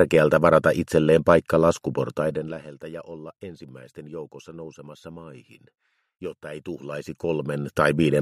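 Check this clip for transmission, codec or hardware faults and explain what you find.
One fault stands out: zipper noise during a level drop. It runs from 2.14 to 2.69 s. The level falls by roughly 20 dB in that half second. It drops in 2 dB steps, not a continuous slope. There are about twenty steps a second. Each jump leaves a tiny click in the waveform. Strung together, the clicks form a fast ticking, a zipping texture laid over the sound. It stops once the level settles.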